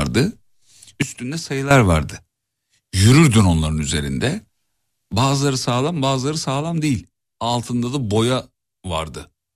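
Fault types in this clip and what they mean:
Sudden gain jump: at 1.02 s the speech and its background noise drop together by about 12 dB, then snap back at 1.71 s. At 5.12 s both fall again, this time by about 6 dB, and stay at that lower level to the end. Each change is instantaneous, with no fade, which points to a level setting or bit shift likely applied from one sample to the next without any ramp.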